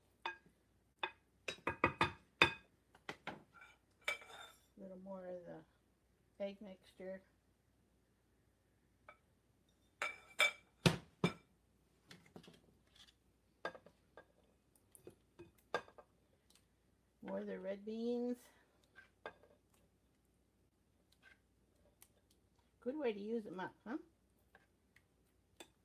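No technical faults are audible.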